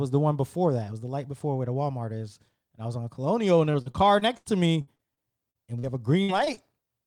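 Speech, and the trouble is all in the back half. From 3.71 to 5.85 s there's repeated packet loss that gives it a robotic sound: ten separate holes, the longest 80 ms, about 380 ms of audio gone in total, so roughly 18% of that stretch is the receiver extending the last sound to cover gaps. That's why it turns choppy. At 6.23–6.31 s a burst of packet loss drops about 60 ms in one go. The decoder holds the previous sound and fades it, giving a brief held buzz or hiss, and the speech picks up further along with that slice simply missing. Right after, two bits of short concealed packet loss land at 6.45–6.48 s and 6.54–6.58 s, each hiding about 20 ms. They come across as quick smears or wobbles where the fill blends back into the real signal, and a short consonant in there could easily disappear.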